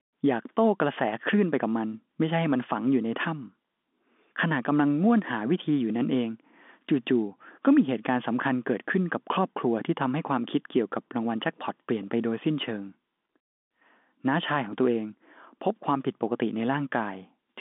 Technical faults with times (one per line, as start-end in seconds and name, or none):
none